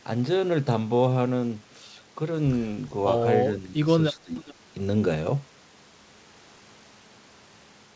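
From 3.48 to 3.77 s the speech level sags by a few decibels for roughly a fifth of a second, then from 4.23 to 4.46 s it drops much harder, by around 20 dB. This is speech suppressed in double talk, likely an echo canceller ducking the near talker while the far side spoke.

From 4.36 to 4.54 s a faint echo leak appears: a copy of the speech arriving 403 ms late, roughly 25 dB below the direct sound. It is likely residual loudspeaker pickup that the canceller missed. The clear delay separates it from room reverberation, and throughout, nothing sounds above 8 kHz, which fits a G.722 call path.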